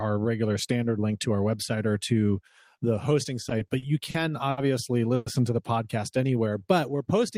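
It's a speech recording with three network-timing faults. Right after "or to the hosting", from 3.49 to 4.59 s, there's repeated stalls (stutter): six short gaps, the longest 70 ms, about 180 ms in all, where the jitter buffer kept running dry and the last sound was stretched over each hole. At 5.15 to 5.28 s, just before "to the podcast", you get a call audio freeze, with roughly 110 ms of continued, fading sound ending in a brief moment of silence, likely from packets held up long enough to empty the buffer. From 6.17 s to the end, after "to the podcast", a jitter buffer slow-down repeats pitch periods to rebuild its reserve, adding about 127 ms so the speech runs at 90% speed with unchanged pitch.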